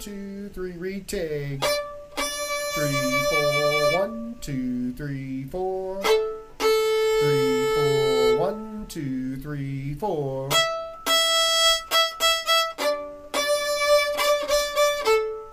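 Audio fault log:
No audible faults detected.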